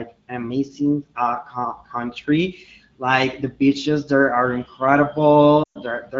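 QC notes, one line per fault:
5.63–5.78 s, lost AMR speech frames: for about 120 ms, which fits six consecutive 20 ms frames, the AMR-WB decoder repeats the last good pitch and vocal tract settings at falling gain. The sound smears and fades instead of cutting abruptly to silence like a dropout.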